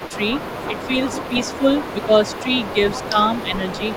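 From the start to 0.81 s, and again from 1.2 s to the end, there's an echo leak: a faint copy of the speech trailing about 217 ms behind, likely a loudspeaker echo the canceller didn't fully remove. At 0.16 to 0.22 s and 0.67 to 3.81 s the speech dips by around 10 dB in patches, which sounds like speech suppressed in double talk, likely the canceller ducking the talker while the far side was also active.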